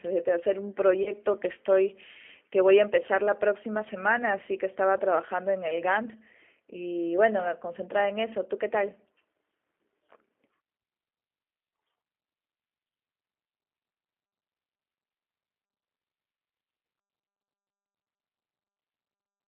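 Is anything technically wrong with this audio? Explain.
Yes. Two faults are audible in this speech clip.

The first runs throughout: G.729 codec damage, plainly audible. The sound passes only from about 300 Hz to 3.4 kHz, so it is thin and muffled. The codec does not send the waveform. It sends a vocal tract filter, a pitch predictor and a few pulses per short frame, and the decoder rebuilds speech from them. That sparse model makes the voice rough and slightly synthetic. The quality fits a low rate near 8 kbit/s.

The second is VoIP packet loss concealed by the speech codec, from 1.03 to 1.11 s. About 30 ms of audio went missing, which fits a single lost packet. The decoder filled the gap by repeating its last pitch and filter at falling gain. This stretches the sound into a brief buzzy tone or coloured noise that fades. Each frame builds on the one before, so the voice stays weak and distorted until about 1.11 s, after the real audio has returned.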